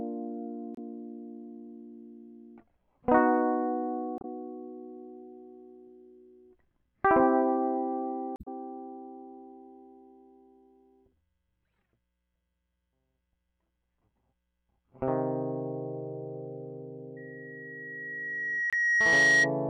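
At 0.75 to 0.79 s the music breaks up briefly. This is damaged data in a compressed stream. Some bytes in the coded frames were lost or overwritten. The decoder misreads those frames, loses sync and hunts for the next valid header. The same glitch returns at 4.17 to 4.25 s and again at 8.36 to 8.48 s. Each one is a brief chirp or blip.

At 17.16 s a loudspeaker feedback squeal begins. A microphone is picking up the speaker it drives, and at 1.9 kHz the loop gain exceeds one. That tone feeds on itself and swells over roughly two seconds. It ends up around 10 dB louder than the music. The result is a piercing single-pitched howl that lasts until 19.51 s. Inside it, at 18.70 to 18.74 s, another short corruption blip cuts through.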